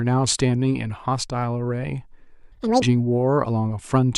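From 2.52 to 2.82 s, the speech is read two samples at a time, running at double speed. It jumps an octave higher.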